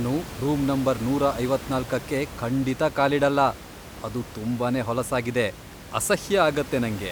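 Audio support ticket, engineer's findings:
No system fault found on this speech clip. Room noise is audible underneath, sitting about 15 dB below the speech, and it comes from the recording space rather than the audio chain.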